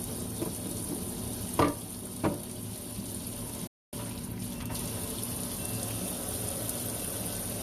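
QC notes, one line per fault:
3.67–3.93 s, rebuffering stall: playback runs dry and halts for about 0.26 s, leaving a flat, empty gap in the waveform and spectrogram before the sound resumes exactly where it stopped.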